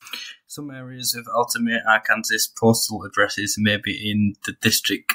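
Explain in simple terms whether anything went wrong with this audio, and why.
Nothing went wrong with this speech recording, and no technical fault can be heard at any point in it. There is no moment to point to, because the sound carries on steadily without any break or damage.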